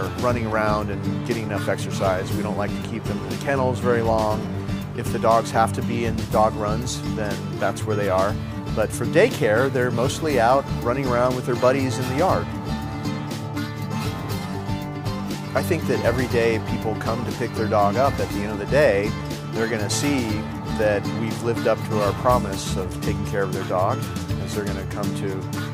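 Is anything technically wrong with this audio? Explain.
No, nothing is technically wrong with this audio.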